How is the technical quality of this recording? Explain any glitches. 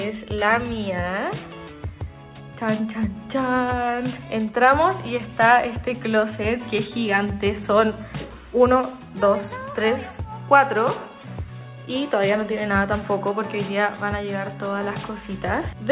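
No glitches or technical faults can be heard here.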